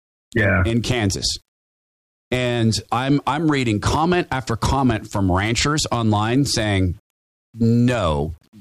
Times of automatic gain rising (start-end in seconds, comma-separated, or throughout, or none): none